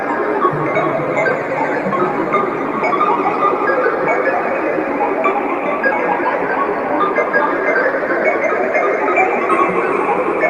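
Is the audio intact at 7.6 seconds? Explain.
Yes, the audio at 7.6 seconds is intact, with no dropout, click, distortion or other fault at that moment.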